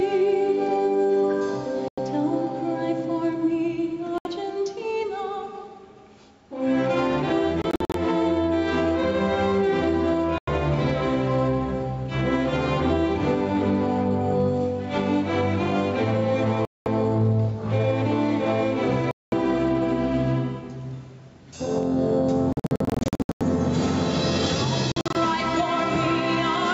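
Throughout the clip the level pumps. The level ducks by about 15 dB under each loud sound, squashing loud and soft parts together. This is gain pumping, likely from input gain set far too high driving a fast limiter. The sound also cuts out at 1.88, 4.18, 7.62, 10.38, 16.65, 19.11, 22.53 and 24.92 s, with missing stretches ranging from 70 ms to 0.56 s. The events at 7.62, 22.53 and 24.92 s are broken into scattered short holes, and each time the sound resumes further on, as if it had kept playing. That is Bluetooth dropout, likely packets not reaching the headphones in time. The call microphone processing path limits the band, with nothing above 8 kHz.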